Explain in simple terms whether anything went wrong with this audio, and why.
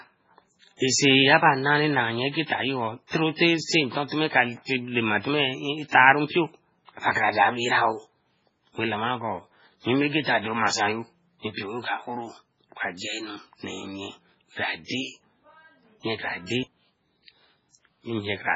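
Two things went wrong. The whole recording has the sound of heavy MP3 compression, likely from being squeezed into a very small file. To save space, the encoder chopped off everything above about 7.6 kHz, so the speech sounds dull and muffled, and it threw away quieter detail that then flickers in and out, giving that watery, swirly quality. S sounds come out metallic or chirpy, and the starts of sounds get blurred.

There's also a spot of pre-echo from about 14.85 to 14.90 s. The encoder handles audio in short chunks and spreads its noise across each whole chunk. When a sharp sound lands late in a chunk, the noise sized for that loud moment also spills into the quiet just before it. You hear a brief hiss, about 55 ms long, arriving ahead of the sound, and the sound's attack feels softened and smeared.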